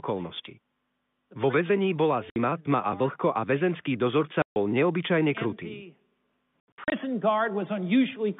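At 2.3 s, between "väzení bola" and "tma a vlhko a", 60 ms drops out. At 4.42 s, after "vlhko a väzenský dozorca", a 140 ms hole follows. From 6.6 to 6.92 s, short gaps total 200 ms. This is packet loss filled with silence. Holes fit 20 ms packets. Their edges are hard.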